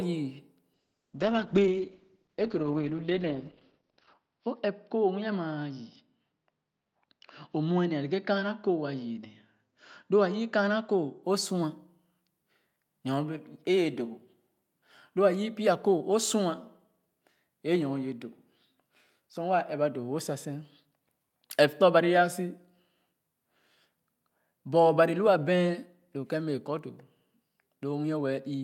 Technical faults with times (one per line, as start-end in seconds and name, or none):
0.77-11.29 call bitrate drop